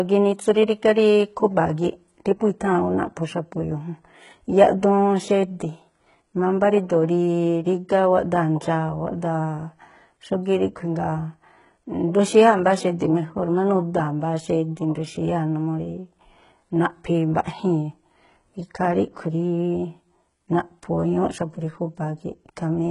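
Speech, and the whole thing carries heavy HE-AAC compression damage, likely from a very low bitrate around 12 kbps. Everything above 11.1 kHz is gone, and the treble below that is rebuilt from copied lower bands, so s sounds come out gritty and metallic.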